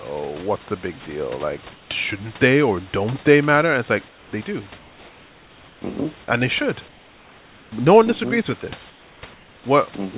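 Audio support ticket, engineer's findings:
Comfort noise in place of the background at 1.72–1.9 s (before "shouldn't they or don't"), 4.08–4.32 s (after "it's like"), 4.78–5.82 s, 6.88–7.72 s (after "and they should"), 8.9–9.22 s and 9.34–9.64 s. Real room noise swapped for smoother synthetic noise, about 3–6 dB quieter. Likely discontinuous transmission in the sender's voice detector. Band stops at 4 kHz, fitting G.711.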